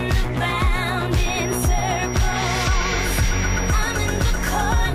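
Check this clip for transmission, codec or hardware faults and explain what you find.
A feedback whistle runs from 1.1 s to the end: a thin, steady 5.7 kHz tone well below the sound, swelling and fading slowly, likely from a loudspeaker-to-microphone loop held just short of runaway.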